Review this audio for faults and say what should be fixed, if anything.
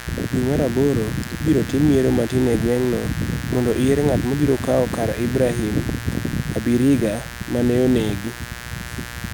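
Mains buzz runs through the whole clip: a raspy, steady drone sitting only around 15 dB below the speech. It is built on 60 Hz, with sharp spikes arriving twice per mains cycle, so its harmonics climb well into the kilohertz range. That bright, gritty edge is what separates it from plain mains hum, which is a smooth low tone near 60 Hz with little energy above a few hundred hertz. To prevent it, keep dimmers and switching supplies off the recording circuit and use properly shielded, grounded cabling.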